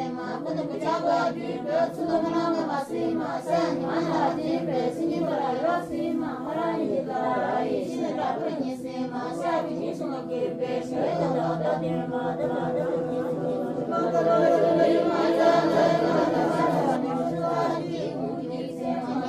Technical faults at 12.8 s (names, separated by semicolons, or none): doubled audio track